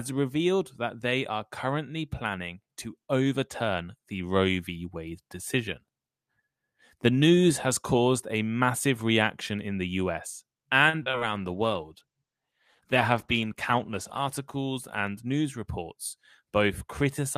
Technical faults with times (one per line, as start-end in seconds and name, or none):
10.89-11.23 repeated packet loss (robotic sound)
11.37-15.75 call bitrate drop
13.79-14.27 jitter buffer speed-up